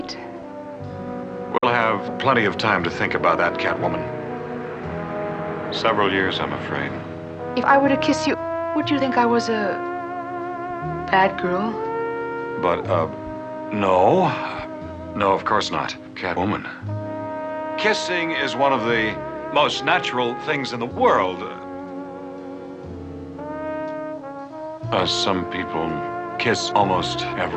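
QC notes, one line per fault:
1.58–1.65 s, Bluetooth dropout: sound cuts to silence for about 46 ms, then resumes further along as if it had played on. The likely cause is packets arriving too late at the headphones. The waveform shows a flat hole; the spectrogram shows a blank vertical band.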